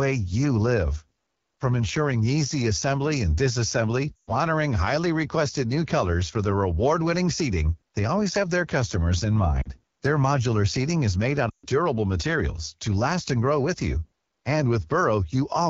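The whole clip carries the AMR wideband (HD Voice) codec. The speech sounds rough and raspy. That grain points to one of the lowest AMR-WB rates, around 8.85 kbit/s. Below 6.4 kHz the voice is rebuilt from pulses driving a vocal tract model. The band up to 7 kHz is filled with shaped noise. At so few bits the model breaks down, and the damage is plainly audible.

Lost AMR speech frames then break the speech three times. At 4.16 s, after "easy assembly and disassembly", about 120 ms goes missing, from 4.16 to 4.32 s. The decoder repeats the last good pitch and vocal tract settings at falling gain. The sound quickly fades to near silence. It comes back rough before "honoring highly requested new". At 9.62 s a shorter gap of about 40 ms goes missing. At 11.50 s, after "made out", about 140 ms is lost, up to 11.67 s. It fades to near silence, and returns weak at "durable materials to last".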